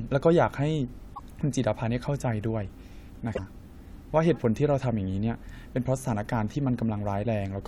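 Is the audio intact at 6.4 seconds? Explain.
Yes, at 6.4 seconds the speech runs intact, with no dropout, click, distortion or other fault at that moment.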